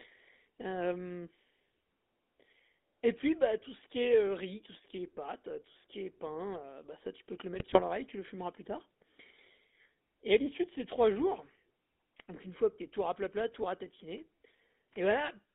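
GSM full-rate coding runs through the whole of this speech recording, giving the voice a plainly audible buzzy, gravelly roughness. The coder models the vocal tract as a filter and excites it with a sparse train of regularly spaced pulses, discarding most of the detailed excitation, which fits the 13 kbps full-rate scheme. The line band is narrow, roughly 250 Hz to 3.6 kHz, so the voice loses both its low body and its upper sibilance. GSM bit errors occur from 7.54 to 7.82 s, where the voice breaks into squawks, pops and a gargling quality for about 0.28 s. Corrupted bits on a weak radio link reach the decoder and scramble the filter, pitch and gain parameters, so individual frames take on a warped spectrum or a jump in level. The burst suggests around a dozen damaged 20 ms frames and an error rate of about 2 percent.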